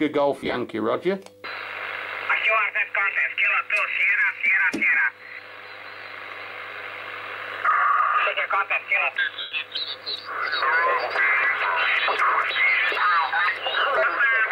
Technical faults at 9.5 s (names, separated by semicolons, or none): lost LE Audio frames